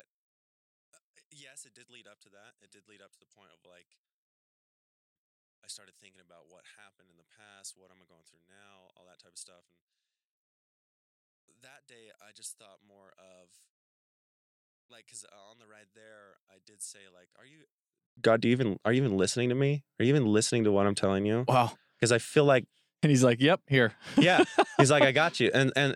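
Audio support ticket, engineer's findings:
Speech collapses to a faint residue from 0.00 to 18.17 s, about 29 dB down when summed to mono; centred content and low end nearly gone. Likely cause: one channel inverted, polarity flipped on one leg, so shared content cancels in the mono sum and only the small left-right difference survives. Normal level resumes after 18.17 s.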